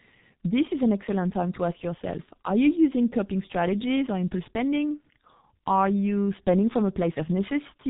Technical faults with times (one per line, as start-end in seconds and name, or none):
0.00-7.89 G.723.1 codec